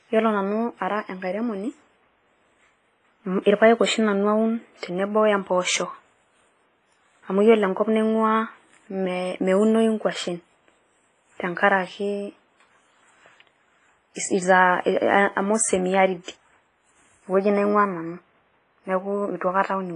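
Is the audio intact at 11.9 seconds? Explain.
No. At 11.9 seconds, as throughout the clip, the speech carries heavy damage from what is likely WMA compression. A transform coder working in long blocks spreads its quantisation noise over tens of milliseconds and drops weak spectral lines, giving a ringing, washy sound with hiss that swells and fades with the speech. A spectrogram shows a hard ceiling near 10.3 kHz, patchy gaps, and smeared energy around onsets, consistent with a low bitrate of around 24 kbps.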